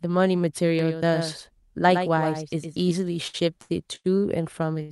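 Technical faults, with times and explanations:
0.79 to 2.91 s, doubled audio track: a second copy of the speech runs about a tenth of a second behind, roughly 10 dB quieter. It is full-band and dry, with no room decay. It starts and stops abruptly. This likely comes from a slower second capture path mixed in.
3.27 to 3.36 s, 3.62 to 3.71 s, 3.95 to 4.06 s and 4.82 to 4.91 s, short stall from a late packet: a packet arrived late each time, and the jitter buffer ran dry. The last sound is stretched for 63, 77, 88 and 73 ms, with a slight buzz or dip. Speech then resumes where it stopped. Nothing is skipped.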